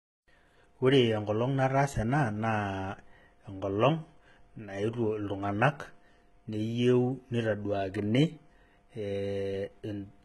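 Throughout the speech, heavy damage likely from HE-AAC compression: replicated treble makes s sounds gritty, and a spectrogram shows blocky copied upper bands ending abruptly at 11.8 kHz.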